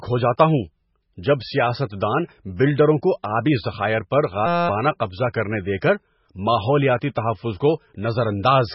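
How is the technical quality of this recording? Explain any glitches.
The recording has three technical problems: heavy codec damage throughout, a stuck-buffer loop, and one pre-echo.

MP3 compression (whole clip): The encoder likely ran short of bits, at a rate that fits roughly 16 kbps, so it discarded weak frequency lines from frame to frame and removed everything above 5.6 kHz. The result is a heavily watery, swirling sound with dull, band-limited treble.

System hang loop (4.46 to 4.69 s): The system froze while the sound hardware kept replaying the same short buffer, which fits a 256-sample buffer. A 5.8 ms slice repeats 39 times, producing a steady buzz at 172 Hz. About a fifth of a second of real audio is lost.

Pre-echo (5.81 s): The codec spread its quantisation noise across the whole block, so noise scaled for a sharp attack also filled the quiet moment before it. Just before the attack there is a 16 ms smear of hiss, and the onset sounds blurred.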